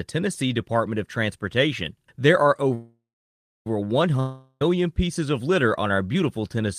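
At 2.74 s the speech hangs in a call audio freeze: the last sound smears into a fading buzz, then about 0.63 s of silence, until 3.67 s. It resumes where it stopped, now running about 0.92 s late. Delayed packets likely drained the jitter buffer.

From 4.20 to 4.62 s there's a long network dropout: roughly 0.41 s of the speech is likely lost in transit, covered by a fading buzzy fill with no real silence, before the audio jumps ahead and picks up at "pieces of litter on".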